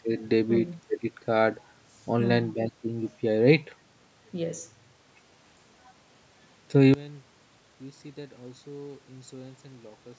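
At 6.94 s the speech suddenly drops by about 23 dB and stays that way to the end at 10.18 s. What's left is a faint copy of the speech. The likely cause is one channel inverted: with one side's polarity flipped, everything common to both channels cancels when they're folded to mono, so only the small difference between them survives. The call-style band limit, with nothing above 8 kHz, is there throughout.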